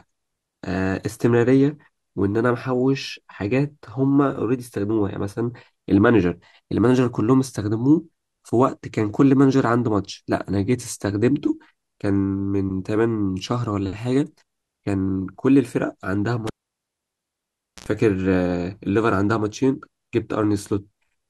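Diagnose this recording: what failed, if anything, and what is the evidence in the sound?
Analogue wiring: a cable pulled and plugged in from 16.47 to 17.86 s. A pop, 1.34 s of near-silence, 69 ms of 60 Hz buzz, then another pop. The buzz rules out a digital dropout.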